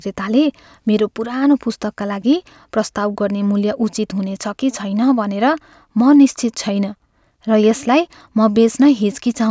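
Nothing in this recording stands out as a technical fault; the speech just carries on without any glitch, dropout or distortion catching the ear along the way.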